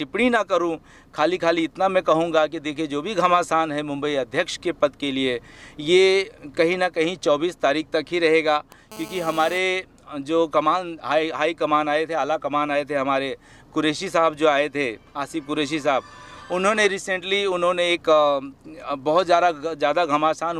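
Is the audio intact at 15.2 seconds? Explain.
Yes, at 15.2 seconds the audio plays through intact, with no dropout, click, distortion or other fault at that point.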